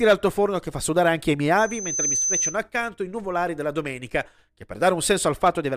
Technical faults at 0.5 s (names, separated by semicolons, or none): none